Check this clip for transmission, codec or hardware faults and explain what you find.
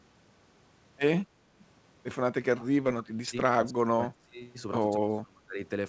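One fault recurs three times in this speech clip. It is heard over a call path whose band stops at 8 kHz, which fits G.722 at 64 kbps.

Speech suppressed in double talk occurs at 2.49–3.37 s, 3.61–4.42 s and 4.98–5.55 s. The echo canceller likely mistook overlapping talk for echo and turned both down, so the speech sinks by up to about 30 dB.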